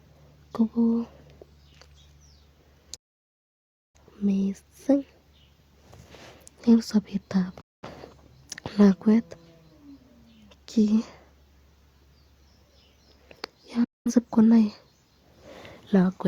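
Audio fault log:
2.96 to 3.99 s, digital broadcast dropout: the speech fades out within about 8 ms and stays silent for nearly a second. The receiver muted on failed frames; that stretch is gone.
7.61 to 7.88 s, digital broadcast dropout: a shorter hole of about 0.21 s, again with a quick fade. This fits roughly five lost frames.
13.84 to 14.12 s, digital broadcast dropout: another 0.21 s silence, same fast fade. Speech resumes later, and the missing part never returns.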